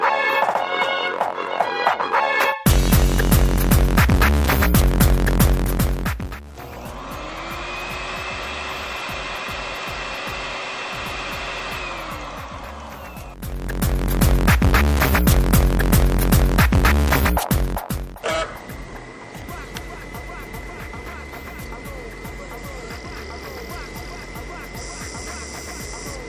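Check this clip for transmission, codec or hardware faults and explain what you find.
Listening through the clip, nothing stood out as a problem worth flagging.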